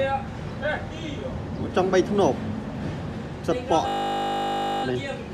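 At 3.88 s the audio freezes into a system hang loop that lasts until 4.84 s. The computer or its driver stalled while the sound hardware kept replaying the same 20 ms stretch of its ring buffer, roughly fifty times over, which fits a buffer of about that length. Because the loop is so short, it is heard as a steady, flat buzz at 50 Hz. When normal playback resumes, little or no audio appears to be missing.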